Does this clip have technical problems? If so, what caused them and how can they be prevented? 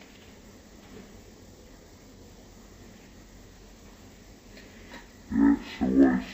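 Yes. Stereo read as mono runs throughout: interleaved left and right samples are played back as one channel, so everything plays at half speed and a full octave low. A spectrogram shows content squeezed downward with a fainter mirrored copy in the upper half. Declaring the correct channel count when decoding prevents it.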